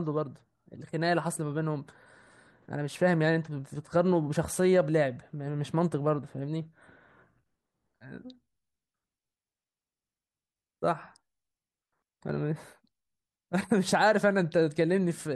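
Nothing goes wrong anywhere in this stretch of speech, so there's no fault to point to at any moment.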